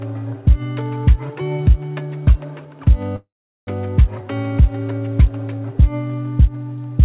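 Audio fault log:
3.16–3.69 s call audio freeze: the last sound fades into 0.4 s of silence, likely a starved jitter buffer; audio resumes 0.51 s late, nothing skipped.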